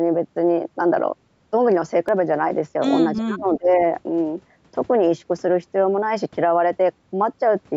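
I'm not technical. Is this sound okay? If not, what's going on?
No. At 2.09 s and 4.56 s there are tiny skips, likely audio missing between chunks: a sliver is lost each time the recorder starts a new 2.5-second block.

From 3.17 to 3.80 s the voice dips sharply for about half a second, likely speech suppressed in double talk, where echo control muted it while both sides spoke.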